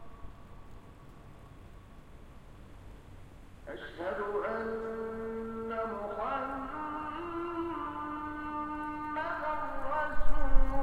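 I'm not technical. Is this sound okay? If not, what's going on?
Yes, no faults can be heard.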